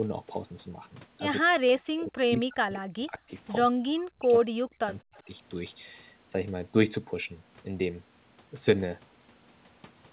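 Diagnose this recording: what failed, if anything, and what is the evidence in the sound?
Speech suppressed in double talk, from 1.43 to 3.31 s and again from 3.72 to 5.27 s. This happens at the call-processing stage. The speech drops away in pieces, by as much as roughly 40 dB at its deepest, for about a second and a half in the first stretch and about a second in the second. The likely cause is that the far side was talking at the same time, and the echo canceller, unable to tell this talker from its own loudspeaker echo, attenuated both.

Echo leak, at 5.15 to 5.20 s, right at the tail of the second suppressed stretch. This is also a call-processing fault, at the loudspeaker end. A brief, very faint delayed copy of the speech arrives 211 ms after the original, sitting roughly 35 dB below it. The likely cause is that the remote echo canceller left a scrap of its microphone's pickup of the loudspeaker in place and sent it back, where it passes through the G.711 path, with nothing above 4 kHz, along with everything else.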